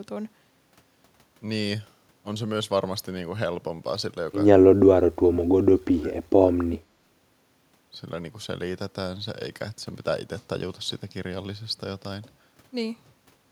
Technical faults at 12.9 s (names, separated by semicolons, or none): none